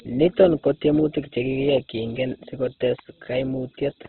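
A speech clip with heavy Opus compression damage running through the whole recording. Nothing is present above about 4.1 kHz, so the band is narrowband and the sound is dull and boxy. Within that band, tones come across rough, grainy and noisy rather than swirling, as energy-preserving band filling replaces lost detail with folded or noise content. This is likely a very low-bitrate Opus encode, consistent with the music (CELT) mode at around 12 kbps.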